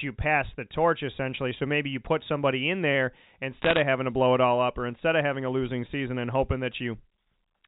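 From 3.62 to 3.8 s, sharp ticks crackle over the speech. These are bit errors on a digital phone line: roughly one bit in a hundred is flipped, and each flip wrecks a single G.711 sample. Unlike packet loss, nothing drops out, and the speech continues unchanged beneath.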